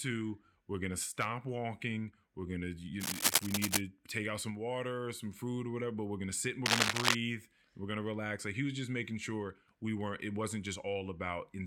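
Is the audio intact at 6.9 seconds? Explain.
No. At 6.9 seconds the speech is overlaid by cable scratch noise, running from 6.66 to 7.15 s, just after "we're gonna sit and". Dense, irregular crackling sits a few decibels above the speech. The likely cause is a worn cable or connector shifting, so its contact resistance fluctuates rapidly.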